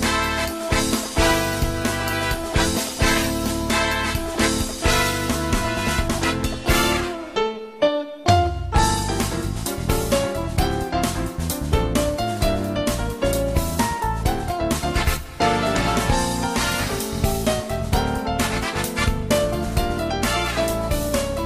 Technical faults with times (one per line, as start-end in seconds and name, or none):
none